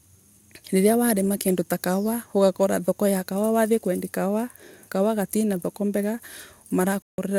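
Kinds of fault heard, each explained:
Bluetooth dropout: the speech cuts to silence from 7.02 to 7.18 s, a 160 ms gap, then resumes further along as though it had kept playing through the gap. The likely cause is wireless packets reaching the headphones too late and being discarded.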